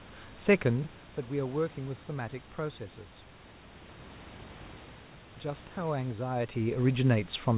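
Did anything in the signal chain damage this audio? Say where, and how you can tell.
Yes. A gain stage in the call processing applied its level changes in unsmoothed 1 dB jumps, about 30 per second, so it produced zipper noise. It can be heard from 0.64 to 1.24 s as the level drops by about 10 dB, and again from 6.32 to 6.76 s as it comes back up by about 10 dB. Each jump leaves a small click, so a fine ticking rides on the speech only while the level is moving.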